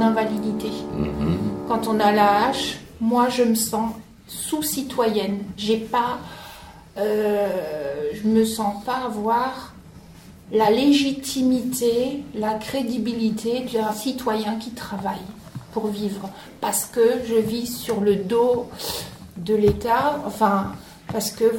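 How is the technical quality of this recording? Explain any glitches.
No glitches or technical faults are audible anywhere in the recording.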